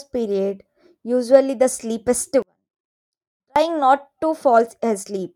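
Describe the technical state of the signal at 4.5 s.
At 4.5 s the speech signal is intact, with no audible fault at that moment.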